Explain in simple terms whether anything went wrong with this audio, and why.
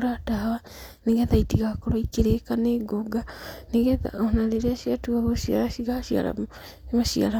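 Nothing went wrong here: listening to the whole recording, there are no glitches, dropouts or odd noises to point to, so there's nothing that needs explaining.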